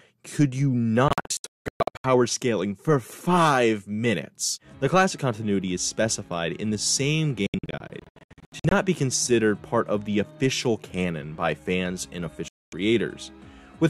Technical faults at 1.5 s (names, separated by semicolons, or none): digital broadcast dropout